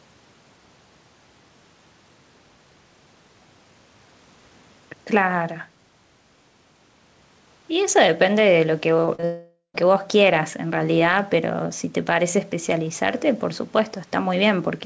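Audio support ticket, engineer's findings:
Short concealed packet loss: brief smears and wobbles at 9.06, 9.15 and 9.20 s. Packets roughly 20 ms each arrived too late, so the decoder extrapolated the preceding sound across each gap.

Long network dropout, 9.25 to 9.83 s: the sound continues as a fading synthetic buzz or hiss, then goes quiet. Likely about half a second of packets lost, with the receiver concealing and then muting until audio resumed.

Call path: no content above 8 kHz, which fits a wideband codec such as G.722.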